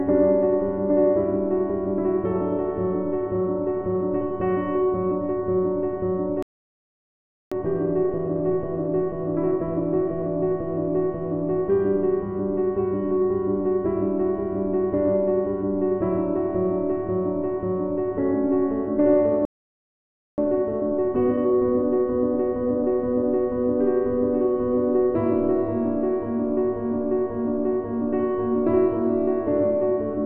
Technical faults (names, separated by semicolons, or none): playback stall; time-compressed catch-up